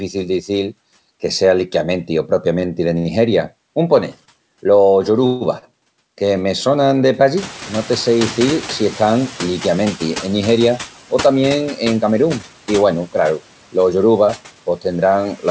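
Throughout the speech, the background noise sinks in the pauses and swells back under the voice. These are noise suppressor artifacts. The suppressor judges, frame by frame, which bands hold only steady noise and pulls them down by about 12 dB. Because that decision keeps flipping as speech comes and goes, the leftover noise pumps instead of sitting still.

Just after "que sea liquiamenti o", at 2.60 to 2.65 s, a sound hangs on slightly too long with a small buzzy sag. The same happens at 2.98 to 3.08 s and again at 5.59 to 5.65 s, just before "que me sonan de". Each is a short stall from a late packet. The jitter buffer ran dry, so the receiver stretched the last sound until the packet turned up: by 22 ms, 71 ms and 36 ms respectively. The speech then resumes where it left off, and nothing is lost.

From 5.26 to 5.44 s the sound freezes into a held buzz that fades without reaching silence, and then picks up again. 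This is a call audio freeze. Packets likely stalled in transit, and the receiver filled the 143 ms wait with a decaying continuation of the last sound. No audio goes missing, but a gap is inserted into the flow.

Around 7.5 s, after "que me sonan de", the room noise jumps by about 19 dB. From 7.36 to 10.28 s it comes through louder before settling down. This is the noise suppressor catching up. Its noise estimate lagged behind the sudden rise and took about 2.9 s to adapt, and during that time the noise was cut by only about 6 dB.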